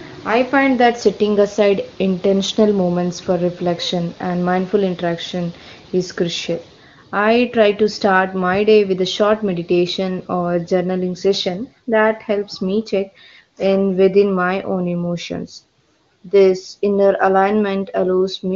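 No faults heard in the speech; the AMR wideband (HD Voice) codec path leaves at most faint coding traces, which fits one of its highest rates, around 23.85 kbit/s.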